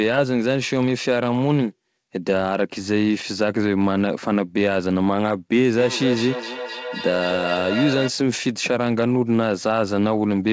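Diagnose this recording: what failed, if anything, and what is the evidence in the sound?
Feedback echo between two devices appears at the call-processing stage from 5.77 to 8.14 s. The speech returns at roughly three-tenths-of-a-second intervals, each repeat thinner and more ringing, peaking at about 7 dB below the direct speech. A second device in the room is playing the call aloud, and this microphone picks it up again. Its echo canceller removes only its own playback, so the loop persists. The band stops at 8 kHz, consistent with a wideband codec such as G.722.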